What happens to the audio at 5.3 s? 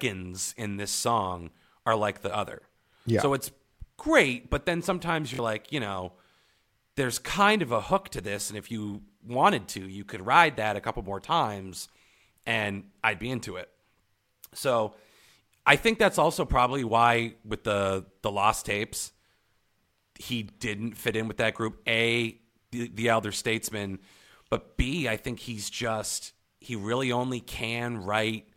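From 5.34 to 5.39 s new audio arrived late, so the device replayed its last 23 ms buffer twice, a repeated buffer heard as a brief stuttering buzz with hard joins.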